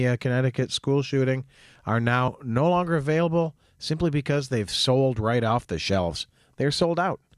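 At 2.28 s, between "school shooting are" and "no longer available simply", two compressed frames of about 26.1 ms each are skipped, losing roughly 50 ms of speech as the audio jumps straight ahead instead of leaving a silent gap.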